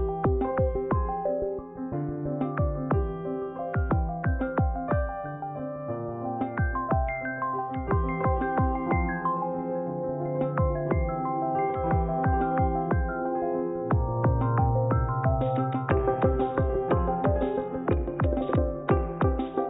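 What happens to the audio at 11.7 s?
Nothing goes wrong at 11.7 s; the audio runs through that moment intact, with no dropout, click or other fault.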